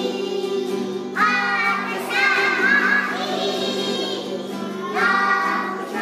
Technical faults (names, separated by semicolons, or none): doubled audio track